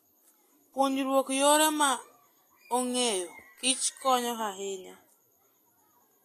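Throughout the speech, the treble above 14.2 kHz is missing and what remains sounds hissy and grainy, with softened consonant attacks: likely Vorbis compression, fitting a bitrate around 32 kbps. Unlike a plain low-pass filter, the upper band turns to noisy grain rather than simply dulling.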